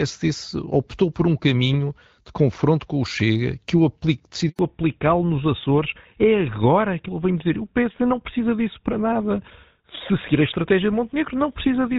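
At 4.49 s the speech cuts out abruptly. This is a handover gap. The call was passed from one network to another, and no speech frames arrived while the link switched. The sound fades within a few tens of milliseconds and stays silent for 100 ms, until 4.59 s. Whatever was said in that window is gone. Before this point the speech is clear wideband HD Voice, with only light coding damage, which fits AMR-WB at around 12.65 kbit/s.

From 4.59 s to the end, a fallback to narrowband takes hold. The new link uses an older codec, and the sound fits GSM full rate at 13 kbit/s. Nothing above 4 kHz survives. The upper band that gave consonants their crispness is missing. The speech sounds duller and more muffled than before the gap. It also has a rougher texture. The change is sudden.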